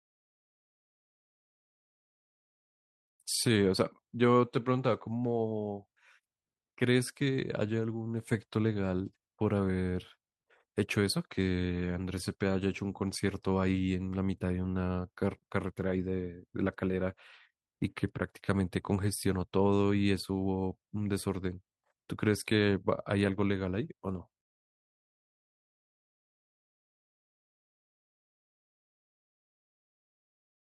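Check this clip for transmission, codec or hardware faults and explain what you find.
No transmission, codec or hardware faults.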